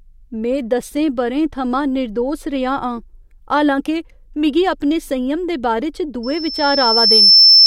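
A speech recording that develops loudspeaker feedback squeal from 6.23 s to the end. A single tone at 5.3 kHz swells over about a second until it sits roughly 10 dB above the speech. This is the microphone re-amplifying its own loudspeaker at that frequency. A spectrogram shows a bright horizontal line at 5.3 kHz thickening as it rises, and the waveform's envelope balloons.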